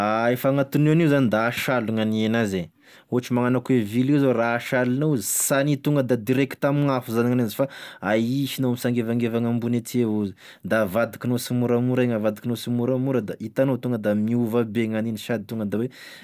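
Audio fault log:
Nothing stood out on listening to the speech in this clip.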